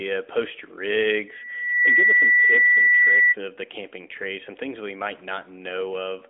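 From 1.27 s to 3.36 s a pure 2 kHz tone swells over the speech in under a second, ending roughly 10 dB louder than it. This is loudspeaker feedback squeal: the microphone picks up its own loudspeaker, and at 2 kHz the loop gain exceeds one.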